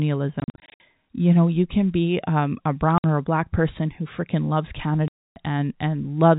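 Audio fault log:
0.4–0.8 s, 2.98–3.04 s, 5.08–5.36 s: packet loss filled with silence, gaps fitting 20 ms packets, scattered early and solid 280 ms late, seen as flat-line waveform holes with hard edges.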